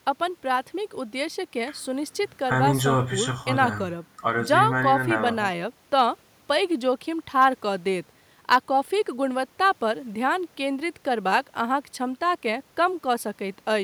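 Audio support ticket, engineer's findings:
No audible faults found in this speech recording.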